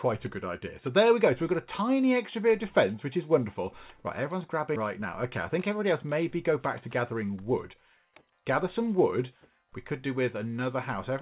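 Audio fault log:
5.0–8.23 s: jitter buffer speed-up, backlog trimmed by cutting short pitch-period pieces repeatedly, roughly 200 ms removed; audio runs about 6% fast at unchanged pitch, sounding hurried.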